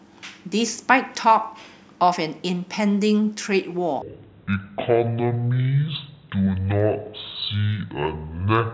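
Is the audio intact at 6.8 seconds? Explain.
No, at 6.8 s the speech is deep and dragging, because a section at the wrong speed runs from 4.02 s to the end. It plays at 0.518 times normal speed, which drops the pitch by roughly ten semitones, likely from playback against the wrong clock.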